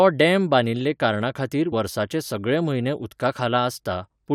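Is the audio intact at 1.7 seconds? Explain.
No. At 1.72 s, between "डॅम बांदिल्ले कारणाखातीर" and "सगळे म्हयने", compressed frames are skipped. About one frame of roughly 20 ms never plays. The decoder lost or rejected it. The sound jumps forward.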